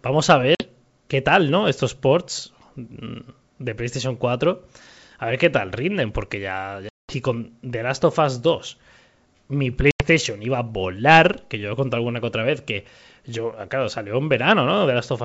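Packet loss on an ADPCM call at 0.55–0.64 s, 6.89–7.15 s and 9.91–10.04 s: gaps of 50, 200 and 90 ms drop to silence, and the sound returns slightly distorted while the decoder's predictor resynchronises.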